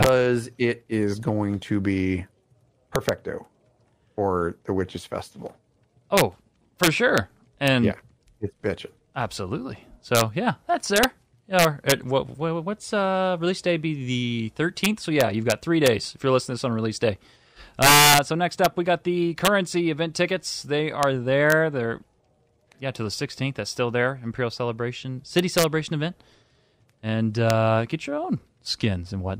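Speech with integer overflow throughout: the gain runs about 8 dB too hot and wraps instead of limiting, so a small fraction of loud peaks flip sign as violent cracks.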